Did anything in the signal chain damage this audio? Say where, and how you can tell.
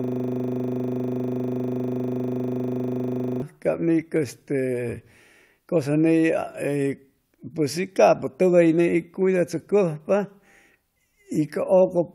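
Yes. A system hang loop at the driver or buffer stage is already under way when the clip opens and lasts until 3.42 s. A single 40 ms slice of speech repeats exactly, about 85 times, giving a rough 25 Hz buzz while the hardware recycles its stalled ring buffer.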